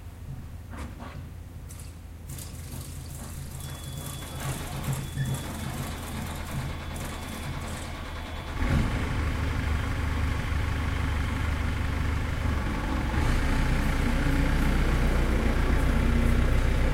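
No technical faults can be heard in this audio.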